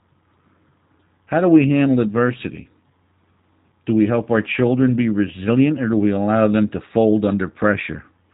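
The whole clip has that G.729 codec sound: nothing above 4 kHz, and a rough, slightly synthetic speech texture that fits a narrowband 8 kbit/s VoIP link.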